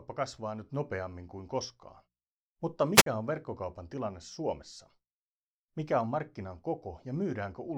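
At 2.94 s a short burst of hiss rises over the speech, then the audio drops into near silence for about 49 ms before the voice returns by 3.06 s. This is a wireless microphone squelch dropout. The radio link from the analogue FM transmitter weakened, the receiver's noise climbed as the carrier faded, and its squelch circuit then muted the output until the signal recovered.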